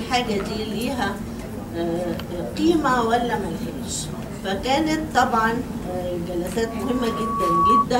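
A single pure tone near 1.1 kHz appears at 6.63 s and swells over about a second into a piercing squeal, ending at 7.87 s and peaking roughly 10 dB above the surrounding audio. This is loudspeaker feedback squeal: a microphone was picking up the loudspeaker it was driving, and at 1.1 kHz the loop's gain went above one, so that frequency kept re-amplifying itself and climbed on its own.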